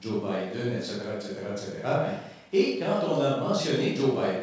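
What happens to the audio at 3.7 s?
Nothing goes wrong at 3.7 s: the speech carries on intact through that moment, with only the ordinary band limit of the G.722 call path, which leaves nothing above 8 kHz.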